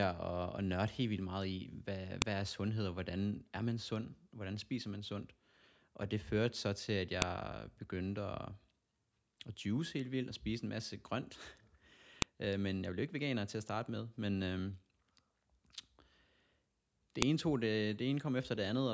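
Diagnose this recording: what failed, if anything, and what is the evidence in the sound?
What failed is at the storage or file-assembly stage: a file header played as audio. There are sharp, loud clicks at 2.22 s (between "vildt meget i hvad" and "er sundhed og hvordan"), 7.22 s (right after "førte så til at"), 12.22 s, and 17.22 s (just before "ene tog"). That's a steady 5-second spacing, so the speech was joined from 5 s WAV pieces with each header left in, and those bytes play as a brief snap at every join regardless of the speech.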